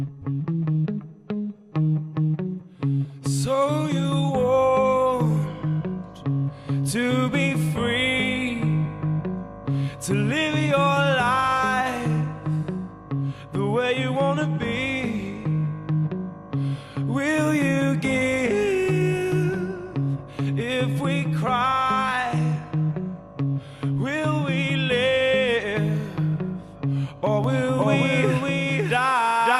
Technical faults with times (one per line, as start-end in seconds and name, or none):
27.44-29.59 doubled audio track